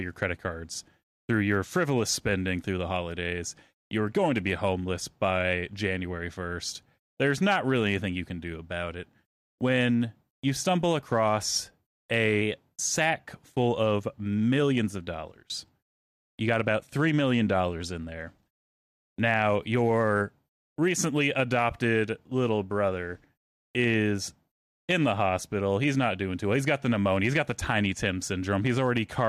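From 12.42 to 13.14 s, speech speeds up 5.42% and rises 91 cents, nearly a semitone, then snaps back. A drift correction step is the likely cause.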